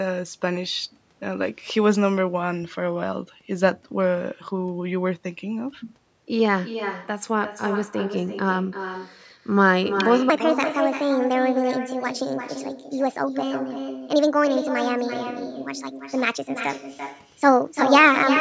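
Throughout, every phrase is trailed about a third of a second later by a quieter, thinner copy roughly 9 dB down: echo with no canceller, the far-end loudspeaker feeding back.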